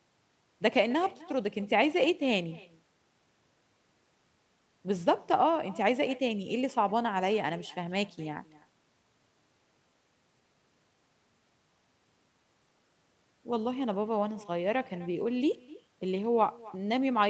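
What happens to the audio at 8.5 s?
At 8.5 s the speech carries an echo with no canceller, present throughout the clip. The far end's loudspeaker feeds back into its microphone and nothing removes it, so the sound returns around a third of a second later, about 21 dB down and thinner. On a waveform each burst trails a small delayed copy; on a spectrogram, faint duplicated harmonic bands sit offset in time below the 8 kHz ceiling of the call path.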